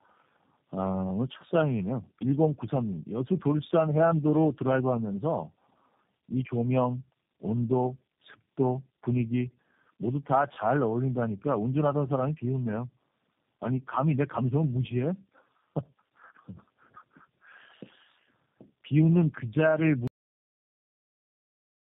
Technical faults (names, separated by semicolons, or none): tandem speech coding; cut-off end